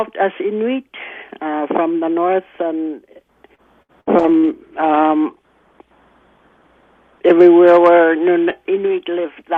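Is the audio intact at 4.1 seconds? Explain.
No, 4.1 s falls inside a stretch of repeated packet loss running from about 3.55 to 4.46 s. Four gaps, the longest 64 ms, get patched by stretching the last bit of sound, so it comes out choppy with small pieces missing.

Right after, at 4.19 s, a call bitrate drop kicks in, going from 96 to 20 kbps until about 7.43 s. The encoder works with far fewer bits and cuts the top end from 20 kHz down to 8 kHz, so the sound turns rough and muffled.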